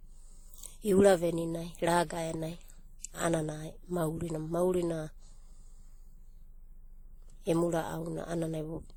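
Throughout the speech, two sets of coding artefacts sound together. This is likely transcoding between lossy codecs, fitting WMA at 48 kbit/s then Opus at 32 kbit/s. A spectrogram shows nothing above 20.2 kHz.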